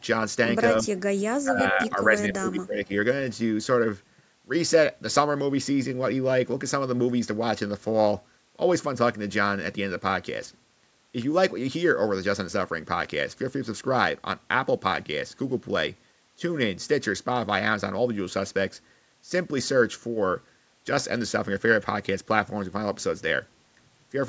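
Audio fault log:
0.83 to 0.87 s, 1.43 to 2.18 s and 2.34 to 2.92 s, speech suppressed in double talk: the speech dips briefly at 0.83 s, by around 10 dB, then twice more for longer stretches, sinking by roughly 15 dB and thinning or breaking into pieces. The likely cause is an echo canceller that, with both ends talking, could not tell this talker apart from loudspeaker echo and attenuated everything it heard.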